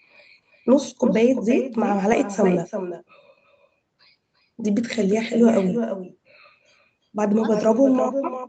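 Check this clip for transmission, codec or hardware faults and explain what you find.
One fault runs through the whole recording: an echo with no canceller. From start to finish, every phrase is trailed by a second copy arriving roughly 300 ms later and about 8 dB quieter. The far end is playing the call through a loudspeaker, its microphone picks that sound up, and with no echo cancellation the signal returns over the network round trip. The copy sounds thinner than the original. What separates it from ordinary room reverberation is that the repeat is a distinct, delayed replica of each phrase, not a smooth decaying tail attached to the sound. The content ends at 8 kHz, which is the expected bandwidth of a wideband call codec.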